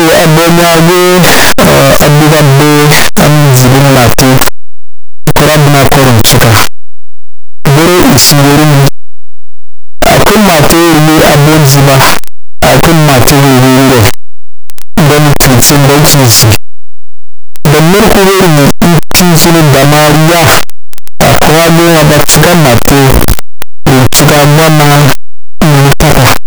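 A speech clip buried under loud, harsh distortion from start to finish, quiet passages as loud as the rest, which points to 8-bit samples likely read with signed and unsigned mixed up.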